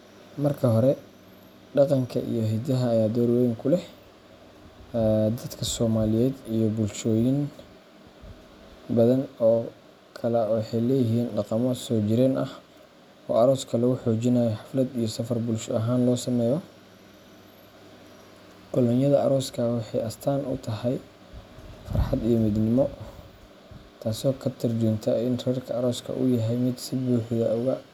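No technical faults are audible.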